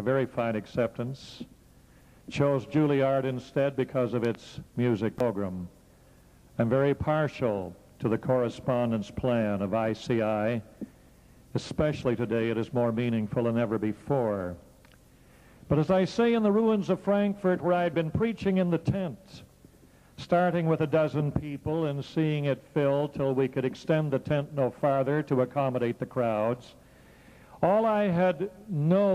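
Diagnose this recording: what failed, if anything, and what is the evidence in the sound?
A loud pop, in fact a pair of sharp pops in quick succession, lands between 4.25 and 4.37 s, standing a few decibels above the surrounding sound, which carries on underneath without a break. The likely cause is a brief voltage step or pulse entering the chain, whether from a plug, a switch, a static discharge or a driver glitch, which the following circuitry shaped into a short, percussive transient rather than a dropout.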